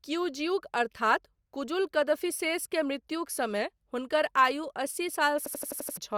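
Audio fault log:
5.46 to 5.97 s, system hang loop: the same 85 ms slice repeats six times, about 12 per second, a stutter that fits a 4096-sample buffer, and roughly half a second of speech goes missing.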